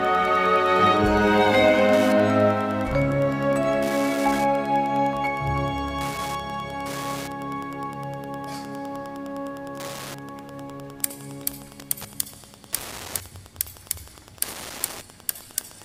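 A nearby Wi-Fi radio is coupling into the audio circuitry, which rectifies its transmissions, producing Wi-Fi interference across the whole recording. The access point's beacon repeats every 102.4 ms, so each rectified pulse lands as a small click and together they form a steady ticking just under ten times per second. It sits roughly 20 dB below the wanted audio.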